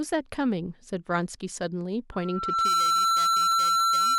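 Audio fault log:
2.12 s to the end (4.19 s), loudspeaker feedback squeal: a steady tone at 1.4 kHz rises out of the speech, swelling over roughly half a second until it sits a few dB above the talker and stays there. That's a mic hearing its own loudspeaker, with the loop gain tipping past one at that single frequency. Each trip round the loop reinforces it, so it feeds itself into a held squeal that nobody breaks before the clip ends.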